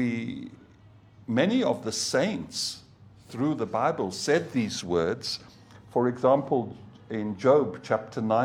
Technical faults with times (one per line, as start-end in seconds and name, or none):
none